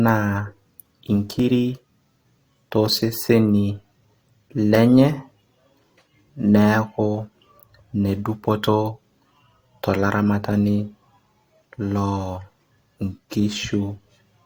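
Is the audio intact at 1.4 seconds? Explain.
No, there's an overlap between stream segments at 1.40 s: the player trims speech it wrongly treats as doubled, so the waveform jumps with a tiny skip.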